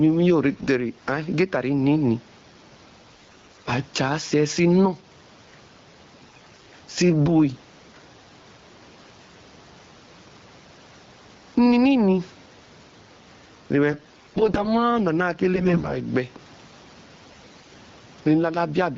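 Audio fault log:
throughout, gain pumping: The room noise sits normally far below the speech, and the gain swings by around 10 dB. Loud and soft passages sit unnaturally close together, most likely from input gain set far too high with a fast limiter clamping it.
0.54–0.68 s, 3.11–3.70 s, 6.27–6.72 s, 13.92–14.69 s, 15.56–15.96 s, 17.23–17.67 s, AMR bit errors: The speech turns hoarse, scratchy and gargly while keeping roughly its pitch and level. Weakly protected bits in the AMR-WB frames were corrupted, misplacing excitation pulses and skewing the finer gain and spectral values. The bursts near 3.1 s and 6.3 s are heaviest, and the one at 17.2 s is mildest.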